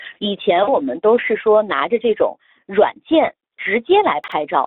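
A speech clip carried through the Speex codec throughout: hoarse, noisy CELP texture confined to a 250 Hz to 3.7 kHz line band, a rate that fits about 11 kbps rather than wideband hiss or MP3 swirl. From 0.63 to 0.76 s, VoIP packet loss concealed by the speech codec stretches the sound into a fading buzzy tone or coloured noise and leaves it weak or distorted afterwards, unlike a clean dropout to silence. The 40 ms gap points to two lost frames. At 4.24 to 4.32 s, chunks out of order jumble one 40 ms stretch that plays one chunk late, with three hard joins but nothing missing, which sets it apart from a gap or a repeat.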